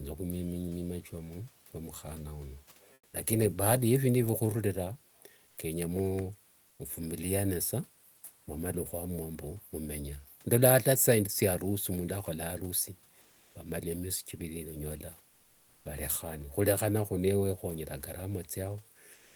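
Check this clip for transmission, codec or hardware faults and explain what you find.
Two kinds of transmission fault are audible, both tied to a sender that stops sending during pauses.

Comfort noise in place of the background appears at 2.93–3.13 s, 5.47–5.57 s, 6.67–6.79 s, 13.21–13.55 s and 15.29–15.85 s. The gaps range from 100 to 560 ms. The room noise, sitting about 31 to 37 dB below the loudest speech, gives way to a smooth, uniform hiss. In four of the gaps the hiss is about 3 to 6 dB quieter; at 5.47 s the level stays matched. The likely cause is discontinuous transmission: the sender goes quiet between speech and the receiver synthesises noise roughly matched to the background's spectrum. On a spectrogram, the textured background becomes a flat, even-toned band, with a level step at the edges of the quieter gaps. On the waveform, the quieter patches show as a lower floor.

Sound dropped by the voice detector occurs at 19.13 s, running to the end of the clip at 19.36 s. 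About 120 ms of real sound is lost and replaced by steady synthetic noise for roughly 230 ms. The voice detector most likely judged this sound to be background and stopped sending before it finished. On a spectrogram, the sound's energy is cut off abruptly into featureless noise. The waveform shows the sound chopped off rather than ending naturally.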